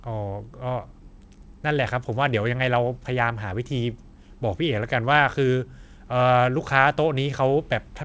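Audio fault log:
No faults are audible: the speech comes through a WebRTC call path whose coding fits G.722 at 64 kbps, with the spectrum ending at 8 kHz, the upper limit of that codec's band.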